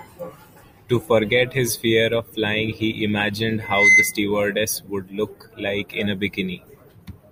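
From 3.61 to 4.16 s a loudspeaker feedback squeal rises over the speech: a pure 2.1 kHz tone swelling for about a third of a second until it sits roughly 10 dB above the voice, as the mic-to-speaker loop exceeds unity gain. A spectrogram shows one bright horizontal line; the waveform's envelope balloons.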